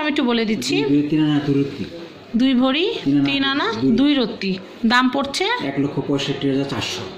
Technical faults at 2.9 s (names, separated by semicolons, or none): none